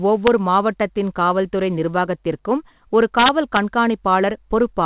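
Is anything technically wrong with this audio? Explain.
Yes, integer overflow at 0.27 s, just before "மாவட்டத்தின் காவல்துறை நிர்வாகத்திற்கும் ஒரு", and from 3.19 to 3.57 s, right after those words. Peaks about 1 dB and about 2 dB over full scale wrapped to the opposite sign instead of being limited, giving sharp, violent cracks harsher than clipping. The speech also passes through a call path with nothing above 4 kHz, which fits a 64 kbps G.711 mu-law telephone codec.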